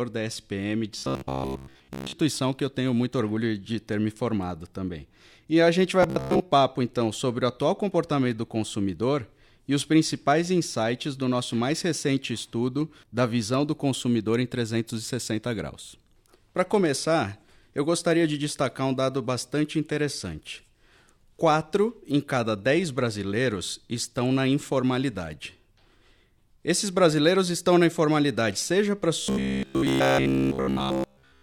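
Robotic sound from repeated short buffers appears at 0.99–2.19 s, just before "que eu tenho muito"; at 6.03–6.40 s, between "a gente vai" and "papo então sobre o"; and at 29.22–31.43 s, after "na informalidade seja para". A rigid 66.7 Hz metallic buzz is heard, likely from a 15 ms buffer being replayed while most of the real audio is skipped, and all of it by the final stretch. The waveform shows identical 15 ms cycles, and the spectrogram shows an even comb of harmonics spaced 66.7 Hz apart.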